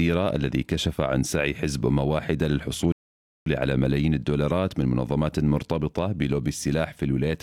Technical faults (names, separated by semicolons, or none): rebuffering stall